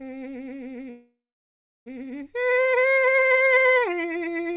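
At 0.9 s the music stops advancing and the last sound is stretched into a fading buzz or hiss that falls silent for roughly 0.68 s before playback resumes at 1.88 s, a call audio freeze likely caused by delayed packets draining the jitter buffer. Nothing is lost, but everything after it arrives about 0.96 s late. The surrounding audio is band-limited to 4 kHz by the call codec.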